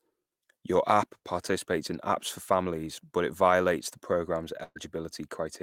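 A short speech recording with one burst of packet loss, right after "it violates the program's", running from about 4.63 to 4.77 s. Roughly 120 ms of the talk just isn't there. The receiver covered the hole by stretching out the last bit of sound it had and fading it down for about 120 ms, with a brief silent stretch of about 30 ms before the speech picks up again further along, so the missing piece simply drops out.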